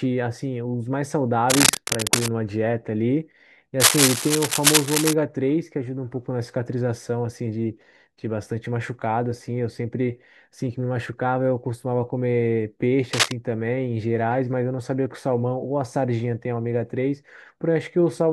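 A worn cable or connector likely shifting, its contact resistance jumping, puts cable scratch noise into the speech from 1.50 to 2.29 s, 3.80 to 5.13 s and 13.13 to 13.32 s. These are uneven scratching, rustling bursts about as loud as the speech, and louder in the second burst.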